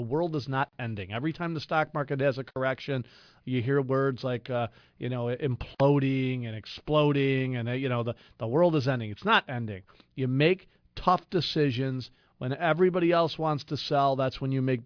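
Speech, with aliasing present from start to finish. The sample rate appears to have been reduced, which fits a drop from 44.1 kHz to 11 kHz, without an anti-aliasing filter first. Energy above the 5.5 kHz fold point reflects back down as unrelated, inharmonic tones roughly 25 dB below the speech. Sibilants sound gritty and metallic, and the spectrum stays dense right up to the band edge.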